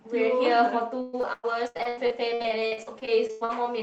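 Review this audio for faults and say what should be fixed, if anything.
Repeated packet loss (robotic sound) runs from 1.01 s to 3.53 s. Twenty-two dropouts, the longest 115 ms, are each bridged by extending the preceding audio, so roughly a third of that stretch is concealment and the speech turns choppy. The call path itself, band-limited to 8 kHz, fits Opus at about 32 kbps. Preventing it means fixing the network loss, adding forward error correction, and giving the jitter buffer more headroom.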